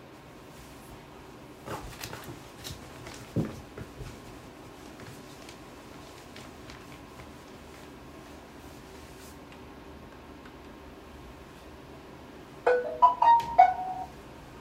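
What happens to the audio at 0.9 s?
Nothing goes wrong at 0.9 s: the sound plays through cleanly at that moment, with no dropout, click, distortion or other fault to be heard.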